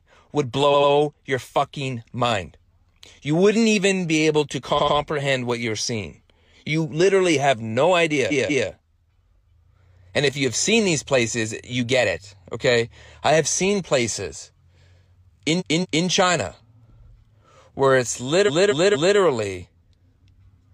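Repeated frames stutter the speech at 0.70–0.89, 4.74–4.93, 8.27–8.64, 15.56–16.03 and 18.44–19.14 s, where a block of compressed frames was duplicated. Blocks of 93, 186 and 232 ms replay twice (three times in the last), adding up to 1.9 s.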